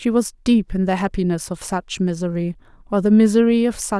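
No technical faults are audible anywhere in the speech recording.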